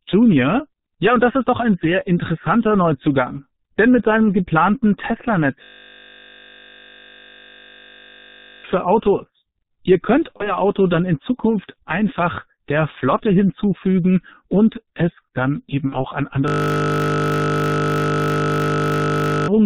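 The whole speech clip passes through the G.723.1 codec at 6.3 kbit/s with heavy damage. Nothing above 4 kHz survives, and the slowly updated voice model in 30 ms frames leaves the speech muffled and hoarse, with smeared consonants.

From 5.64 to 8.64 s a system hang loop takes over. The playback hardware keeps cycling one 20 ms buffer while the system is frozen, so a single slice of audio repeats 150 times. It comes out as a steady 50 Hz buzz, and about three seconds of real audio are lost.

At 10.37 to 10.58 s, and again at 15.89 to 16.05 s just after "und es dann eben", there is VoIP packet loss concealed by the speech codec. Each gap fits one missing 30 ms frame. The decoder extrapolates from the last pitch and filter and stretches the sound out as it fades. The voice stays weak or distorted for a while after packets return.

A second system hang loop runs from 16.48 to 19.48 s. It is the same 20 ms cycle, heard again as a 50 Hz buzz that replaces about three seconds of audio.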